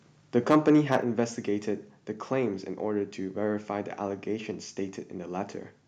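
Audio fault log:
0.50–0.97 s, microphone overload: loud speech peaks take on a harsh, crackling edge, likely because input gain ran about 6 dB past the converter's ceiling, flattening about 1.5% of samples.
1.02 s, microphone volume stepped down: speech and background abruptly drop about 4 dB right after the distorted stretch, likely the call software cutting the microphone's input level in one step.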